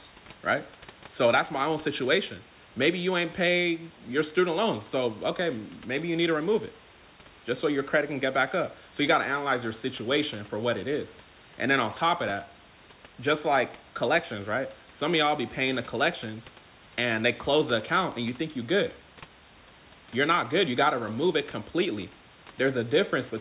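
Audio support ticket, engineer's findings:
No faults found: speech band-limited at 4 kHz, which fits a G.711 mu-law call path at 64 kbps, with room noise sitting about 26 dB below the speech.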